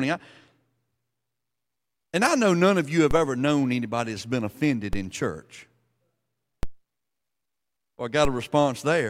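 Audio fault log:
3.11, 4.93, 6.63 and 8.25 s: DC step. At each of these four moments the waveform's zero line jumps suddenly, by about -17 dBFS at the first two and about -16 dBFS at the last two. The offset then slides back to zero, as a 5 Hz high-pass would pull it. That abrupt shift and quick return make a low thump or click each time. The speech carries on unchanged across every step.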